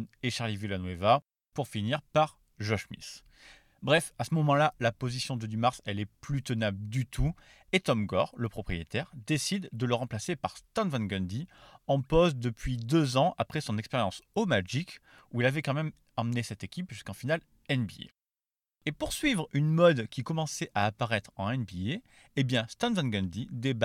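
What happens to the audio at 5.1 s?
Nothing goes wrong at 5.1 s; the speech runs on intact through that moment.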